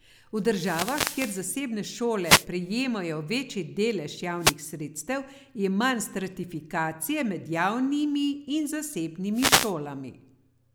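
Wireless microphone noise hits at 0.46–1.51, 2.21–2.47, 4.38–4.56 and 9.33–9.74 s. Each time the FM radio link fades, and bursts of receiver static swish over the speech, unlike steady background hiss.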